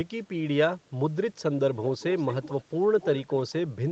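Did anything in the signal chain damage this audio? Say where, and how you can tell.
Yes. From 1.99 to 2.64 s and from 3.0 to 3.54 s, a faint copy of the speech trails the direct signal by 220 ms, roughly 15 dB down. This is an echo leak, likely a far-end loudspeaker whose echo canceller passed residual pickup back into the call.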